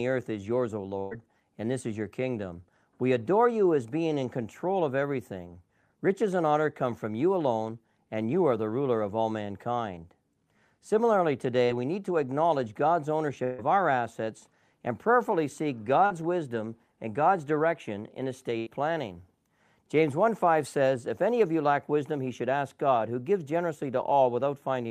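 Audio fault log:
0.99–1.13 s, 13.44–13.60 s, 18.58–18.68 s (after "direction in"): burst of packet loss. About 120, 140 and 80 ms of the conversation are missing. The receiver keeps extending the last sound and fades it, so a voiced sound becomes a held buzz and other sounds a fading hiss. On a spectrogram this shows as frozen, fading sound with no silent gap before the speech jumps ahead.
11.65 s (before "we need to acknowledge") and 16.06 s (between "assets and prayerfully seek" and "wisdom and"): short concealed packet loss. About 40 ms is lost and patched with 33–38 ms of synthesized continuation, which is heard as a brief smear. A spectrogram shows a blurred sliver with a smooth waveform crossfade.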